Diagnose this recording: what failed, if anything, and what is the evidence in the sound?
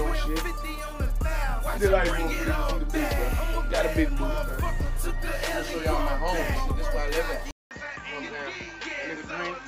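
Input switched to a poorer device at 7.51 s and stays that way to the end, at the capture stage. After a 200 ms silence the sound turns duller, with nothing above 7.6 kHz, a level roughly 10 dB lower and a new, faint noise floor. The system likely changed to another microphone or a headset profile.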